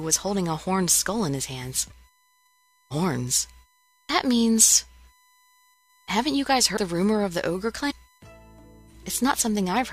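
The audio carries a steady USB whine at 1 kHz, about 40 dB below the signal, from the bus's 1 ms frame current leaking in through power or ground. Compressed frames are skipped at 6.76 s, jumping ahead roughly 100 ms, and from 7.90 to 7.92 s, jumping roughly 200 ms, consistent with dropped or rejected frames of about 23 ms each.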